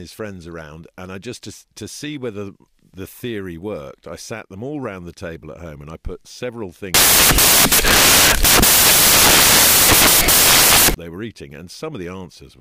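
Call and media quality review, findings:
Samples built from the wrong bytes, 6.94 to 10.94 s, after "and I put several", until "they were eating". Decoder or PCM reader. Byte offset, swapped order or wrong alignment makes noisy low bits dominant: broadband noise, full-band spectrogram smear, dense waveform block.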